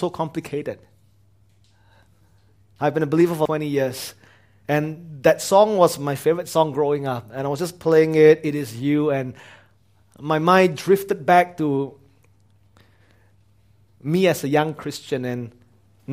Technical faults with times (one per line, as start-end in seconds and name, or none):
3.45 damaged data in a compressed stream